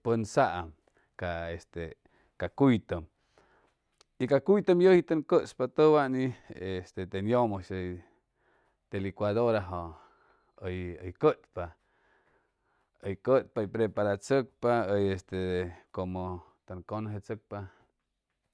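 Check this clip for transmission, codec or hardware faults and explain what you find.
Nothing stood out on listening to the speech as a transmission, codec or hardware problem.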